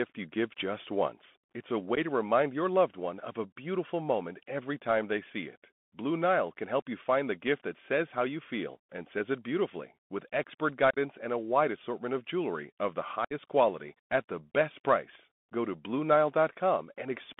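It's a speech clip squeezed through a Bluetooth CVSD headset codec the whole way, band-limited to roughly 200 Hz to 3.5 kHz, with a gritty, granular hiss, consistent with a 64 kbps CVSD link. On top of that there's unconcealed Bluetooth headset packet loss, where dropped packets leave abrupt holes: a short one at 1.95 to 1.98 s before "to remind your loved", a scattered 52.5 ms of gaps over 10.91 to 10.98 s before "and a wide assortment", and 60 ms of dropout at 13.25 to 13.33 s between "of jewelry of the" and "quality at the best".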